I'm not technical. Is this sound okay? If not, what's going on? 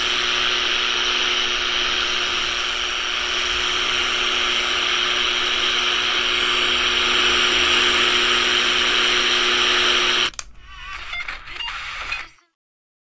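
Yes, this sound is fine; there's nothing wrong to hear.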